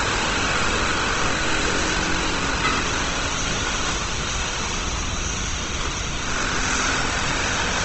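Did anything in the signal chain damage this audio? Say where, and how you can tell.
Yes. Throughout the sound, the codec stage has left its mark: tones are rough and grainy, and nothing is present above 8.2 kHz. The likely cause is Opus compression in its music mode at a low rate near 16 kbps, filling starved bands with noise. That graininess without swirling holes separates it from MP3.

At 1.28 s, a buffering problem in the driver shows as an abrupt jump forward, losing about a tenth of a second without any gap of silence. That skip, rather than a silent dropout, points to a dropped buffer (overrun), where samples were overwritten before being read.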